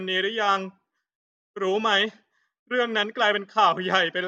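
No technical faults can be heard in this recording.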